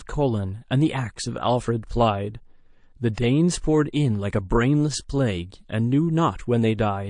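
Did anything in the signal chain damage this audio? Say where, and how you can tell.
Yes, at the codec stage. Throughout the speech the upper range sounds watery and swirly, with chirpy, metallic sibilants and smeared consonant attacks. That points to a bitrate around 40 kbps in a likely MP3 encoder, which zeroes weak frequency lines so they flicker between frames. Unlike a plain low-pass filter or band-limited line, the damage moves and warbles instead of sitting as a steady dull edge.

Pre-echo, also from the codec, appears from 3.14 to 3.17 s. A hiss rises about 25 dB above the quiet before a sharp onset and spreads across roughly 34 ms before it, and the attack itself sounds softened. The encoder kept its long 52 ms transform window here instead of switching to short blocks, so the noise sized for the loud onset filled the silence ahead of it. Reverb or echo would trail after the sound, not come before it.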